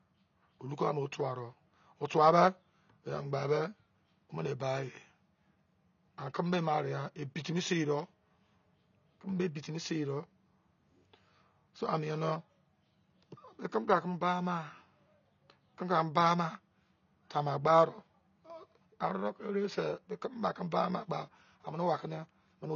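From start to finish the speech sounds dull and smeared, with nothing above about 6.9 kHz and a warbling, fizzy texture on sibilants and held sounds. The likely cause is AAC compression: an AAC-LC encoder starved of bits, which fits a low rate around 24 kbps, cuts off the top of the spectrum and quantises the remaining frequency lines so coarsely that bands drop out or fill with substitute noise.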